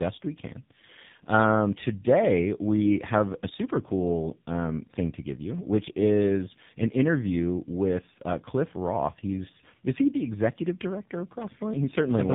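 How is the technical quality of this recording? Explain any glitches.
The quality is poor throughout, due to tandem speech coding. The sound passed through two speech codecs in a row. It fits GSM full rate followed by AMR-NB at 7.4 kbit/s, with a G.711 link between. Each coder re-encodes the previous one's damage. The speech sounds rough, muffled and warbly, with nothing above 3.8 kHz.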